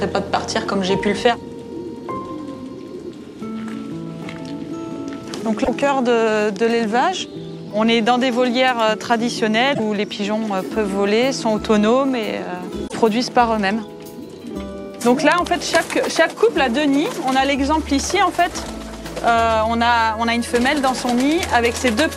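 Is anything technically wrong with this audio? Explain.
Yes. There's damaged data in the compressed stream at 5.61–5.69 s, 9.71–9.80 s and 12.84–12.94 s. Corrupted bytes there make the decoder misread frames and lose sync until it finds the next frame header, so each spot comes out as a short chirp or squawky blip.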